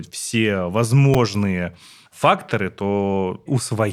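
Brief clicks or buzzy ticks at 1.14 s and 2.49 s are a repeated buffer: a 5.33 ms chunk, likely a 256-sample buffer, replays two and three extra times because fresh audio arrived late.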